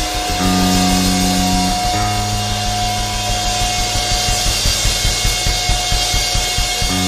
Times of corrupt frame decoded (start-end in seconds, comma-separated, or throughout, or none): 1.99-2.03, 4.30-4.35